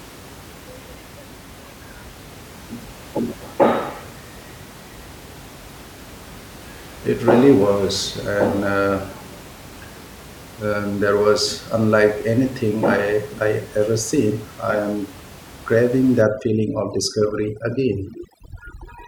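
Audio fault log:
16.22–19.07 s, overdone noise removal after "seen I am craving": aggressive spectral gating mutes bands near the noise floor, taking quiet parts of the voice with them and leaving twinkling specks in near silence.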